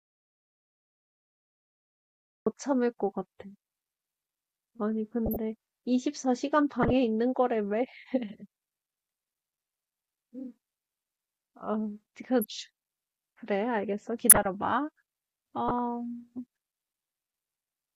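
The input to the recorder was likely lost before the clip begins, with the recording chain writing silence in its place. That audio dropout to silence is still under way when the speech clip opens: from the first instant until 2.46 s there is silence, without even room tone. Then the speech arrives abruptly, already in progress, so whatever preceded it is missing.

Later, damaged compressed frames were decoded and played as though valid. Corrupted gain values and misread codes pushed energy into the wrong frequencies for roughly the span of each bad frame run. These corrupt frame decoded events sound as short bursts of noisy, chirping garble over the speech at 5.26–5.37 s, 6.81–6.93 s, 14.29–14.47 s and 15.68–15.79 s. Each covers a handful of frames. The quieter ones, at 5.26 and 15.68 s, peak near about -15 dBFS. The one at 6.81 s is louder, around -10 dBFS, and the burst at 14.29 s is the harshest and longest, close to about -5 dBFS.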